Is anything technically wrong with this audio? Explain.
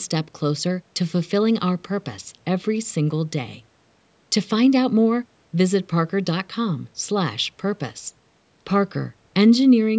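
No, nothing in this speech recording points to a technical fault. It has passed through a call's microphone processing, so the lowest bass has been filtered away and nothing reaches above 8 kHz, which is ordinary for that kind of path.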